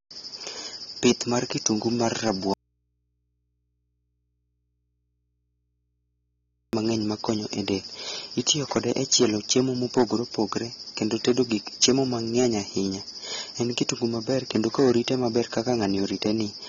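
Throughout the speech, hard clipping from roughly 9 dB of overdrive flattens the loudest peaks, under one percent of samples, giving crackle on peaks and squared-off tops in the waveform. The whole clip also sounds dull and swirly, likely from AAC compression at a low bitrate near 24 kbps; a spectrogram shows a sharp ceiling at 7.5 kHz. From 2.54 to 6.73 s, after "mar kitungu mar", an audio dropout to a faint residue leaves only hum about 50 dB down, likely a lost input, until speech snaps back at "makonyo e del itiyo". On screen it is a nearly flat stretch with a thin hum line.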